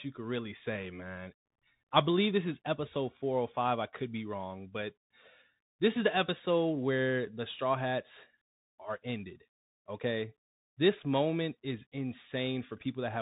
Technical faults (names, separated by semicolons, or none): Bluetooth CVSD headset codec